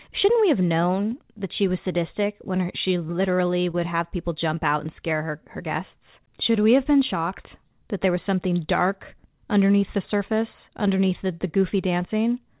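Around 3.71 to 3.75 s there's a short concealed packet loss: about 20 ms never arrived, so the decoder stretched the preceding sound across the gap, leaving a quick smear in this speech, band-limited to 4 kHz by the call codec.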